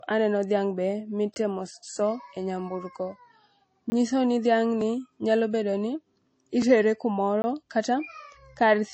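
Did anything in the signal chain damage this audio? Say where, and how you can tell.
Yes. At the codec stage, nothing survives above 8.3 kHz and the speech sounds watery and swirly throughout, which points to MP3 compression at a low bitrate, likely around 32 kbps.

At the driver or buffer stage, there are blocks of digital silence at 1.34, 3.90 and 7.42 s. Each is a 20 ms hole, so audio drops out rather than skipping.

Also at the driver or buffer stage, there are jumps at 4.81 and 6.62 s with no gap, where the speech jumps ahead by a few milliseconds. That is likely a dropped buffer (overrun) joining the two sides directly.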